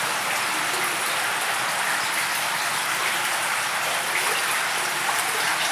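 Nothing in this recording of everyday sound stands out as a technical fault, so there's nothing to flag here.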